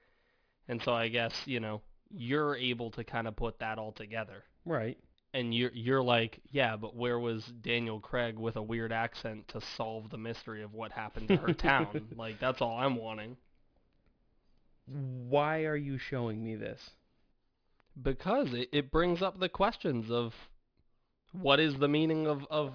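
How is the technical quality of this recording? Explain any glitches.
The recording has one fault present throughout: aliasing. Sibilants sound gritty and metallic, with harsh false tones about 20 dB below the speech, all piled up to a hard edge near 5.5 kHz. This fits a drop to roughly an 11 kHz rate without filtering, so everything above 5.5 kHz folded back as wrong pitches.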